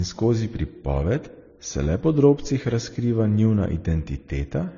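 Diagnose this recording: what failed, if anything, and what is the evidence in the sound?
The codec stage failed, throughout the speech. Nothing comes through above about 6.9 kHz, and two different kinds of lossy smearing sit on top of each other. That fits transcoding between lossy codecs, likely a low-rate AAC encode re-encoded to MP3 around 35 kbit/s.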